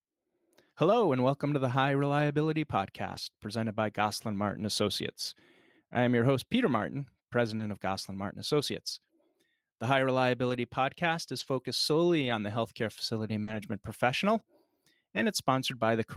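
Lost packets rebuilt from error correction occur at 3.07–3.17 s, 7.59–7.61 s, 10.49–10.55 s, 11.39–11.45 s, 12.21–12.31 s, 13.47–13.57 s and 15.17–15.19 s. Each rebuilt stretch lasts 20 to 60 ms. The decoder plays a low-bitrate copy carried in the next packet, so there is no gap, but the sound turns briefly rougher and noisier.

Short concealed packet loss occurs at 7.57–7.61 s and 13.43–13.49 s. In each case 20 to 40 ms never arrived in time. The receiver extends the last sound and then blends back, giving a brief smear or wobble. Both of these losses run straight into a rebuilt stretch.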